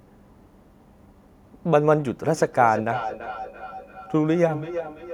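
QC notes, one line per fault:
2.26–5.13 s feedback echo between two devices. Speech loops back through a second device roughly every 0.3 s, thinner each time, about 12 dB down.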